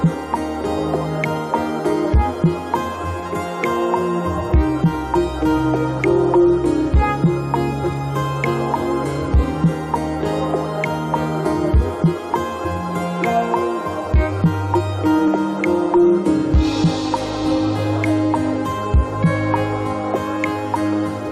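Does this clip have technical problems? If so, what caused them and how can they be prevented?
Yes. Clock drift buffer slips are heard as a regular click at a steady interval of about 3.08 s, running from 2.95 s to 18.35 s, roughly seven in all. The likely cause is two devices on independent clocks differing by around 50 ppm, so the buffer between them slowly fills or drains until a handful of samples is dropped or repeated, which produces each click. To prevent it, lock all devices to a single word clock or use asynchronous sample-rate conversion between them.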